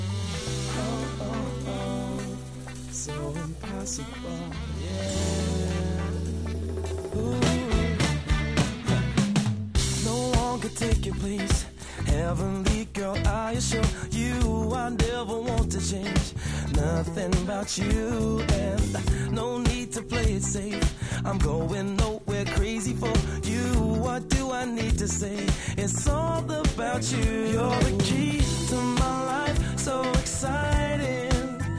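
No technical faults can be heard anywhere in the recording, and the signal holds steady throughout.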